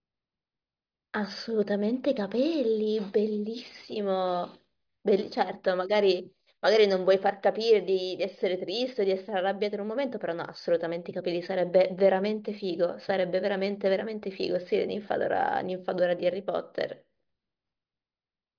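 No technical faults are audible anywhere in the recording.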